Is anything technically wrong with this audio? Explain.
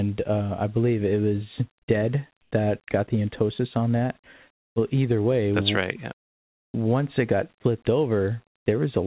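Yes, two kinds of fault are audible in this speech clip, which runs through a call path with nothing above 4 kHz, consistent with G.711 mu-law at 64 kbps.

Comfort noise in place of the background occurs at 2.42–2.51 s (90 ms, about 8 dB quieter) and at 6.29–6.74 s (450 ms, about 2 dB quieter). The likely cause is discontinuous transmission: the sender stopped sending during pauses, and the receiver substituted smoother synthetic noise for the real background.

An onset clipped by the voice detector occurs at 6.72–6.74 s. The detector was likely slow to register that sound had resumed, so the first 20 ms were never sent and comfort noise filled that gap. The sound that follows starts abruptly, without its soft beginning.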